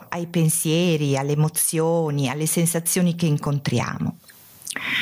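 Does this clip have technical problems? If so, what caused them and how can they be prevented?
Yes. The speech shows gain pumping from start to finish. The level swing is around 25 dB. Loud and quiet passages sit unnaturally close together, so the sound feels squashed. The likely cause is input gain set far too high, with a fast limiter or compressor clamping down on every peak. To prevent it, lower the input gain and use gentler, slower compression.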